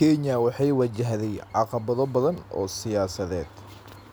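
Nothing stood out as a technical problem on listening to this speech recording.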